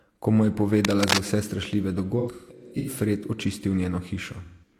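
From 0.84 to 1.18 s, just before "vse strašljive", cable scratch noise adds dense scratching at roughly speech level, likely from a worn connector changing contact resistance. AAC frame loss with concealment follows at 2.19–2.90 s, with dropouts totalling 384 ms and the longest run around 150 ms, and again at 4.44–4.73 s, with 171 ms lost. The decoder fills each gap from earlier spectra, giving smeared, phasey patches.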